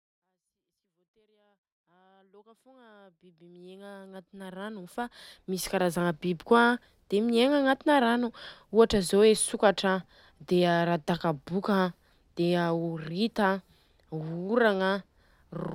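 No technical faults are present in the speech recording; the level rises in a smooth, editor-style fade from the very beginning until about 6.0 s and then holds steady with no clicks, dropouts or hard edges.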